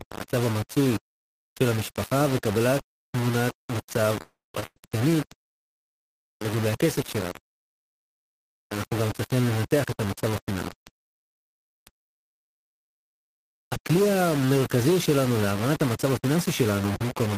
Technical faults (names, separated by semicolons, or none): low bit depth without dither; call audio freeze; short stall from a late packet; jitter buffer speed-up